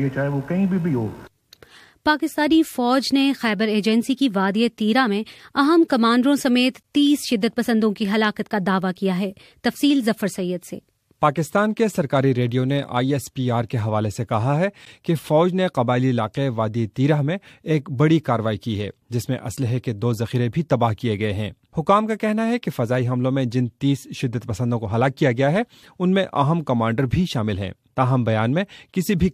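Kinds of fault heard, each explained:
Gap between stream segments: hard-edged silences of about 12 ms at 6.83 and 14.85 s, on 4-second segment boundaries; silence is inserted, no audio lost, unlike a dropout.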